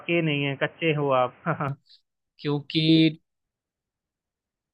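From the start to 1.69 s the speech is narrowband and boxy, with nothing above 3.2 kHz, sitting roughly 5 dB quieter and carrying a faint noise floor around 30 dB below the signal. At 1.69 s the full bandwidth returns abruptly, with no gap at the change. This points to an input switched to a poorer device, likely a headset in its call profile or a lesser microphone, before the system moved back to the main input.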